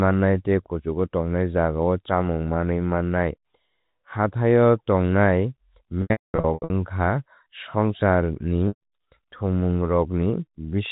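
Speech over a telephone-band line, cut off above 4 kHz as G.711 coding does, is interrupted by packet loss with pitch repetition. From 6.02 to 6.7 s the sound turns held and buzzy, then fades toward silence before returning through a brief cross-fade. About half a second of audio is missing across that stretch, with the longest gap near 220 ms. A shorter held buzz follows at 8.68 to 8.8 s. Both come from the receiver repeating the last pitch period to bridge the lost packets.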